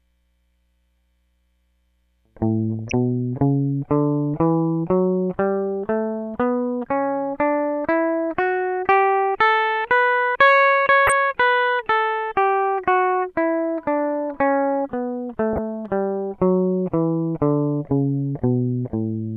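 DAB burbling in this music at 2.74–2.92 s, 11.07–11.12 s and 15.53–15.58 s: weak-reception bit errors corrupt MP2 sub-band samples, causing brief blips of noise in single sub-bands.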